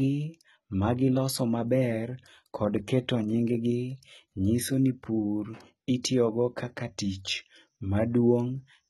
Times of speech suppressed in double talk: none

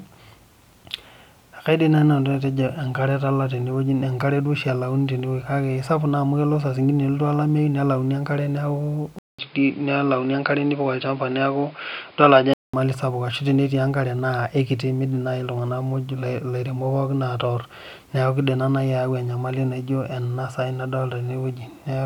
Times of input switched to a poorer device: 9.19-12.73

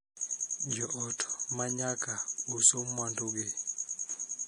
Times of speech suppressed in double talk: none

